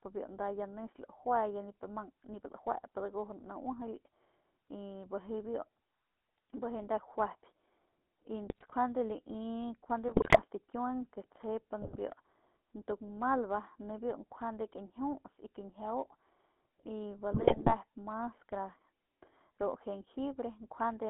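GSM full-rate codec runs through the whole clip. The speech has been squeezed through a vocal-tract model excited by a sparse, regular pulse train, the kind of coarse coding that points to a budget of about 13 kbps. The line band runs from roughly 250 Hz to 3.4 kHz, so the lows are thin and the sibilance is dulled. The codec damage is plainly audible as a buzzy, gravelly grain over every syllable.

GSM bit errors break in four times: 8.47 to 8.75 s, 10.08 to 10.43 s, 11.82 to 11.97 s, and 17.32 to 17.75 s. Corrupted bits reached the decoder, scrambling its filter, pitch and gain parameters frame by frame. In each burst the speech collapses into squawks, pops and gargling. The burst at 10.08 s carries the highest error rate of the four.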